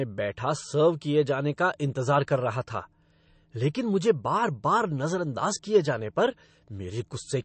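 MP3 compression runs through the whole recording: nothing reaches above 8.3 kHz, and the speech has a plainly watery, swirling texture with chirpy s sounds. Likely cause: an encoder starved of bits, fitting roughly 35 kbps, cut the treble and let weak frequency lines flicker between frames.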